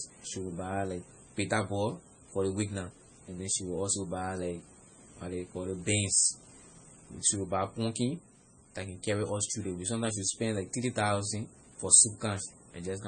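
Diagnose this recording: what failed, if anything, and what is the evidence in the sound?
Codec stage, likely MP3 compression starved of bits, fitting roughly 24 kbps: treble stops at 9 kHz throughout, and weak lines flicker frame to frame, sounding watery.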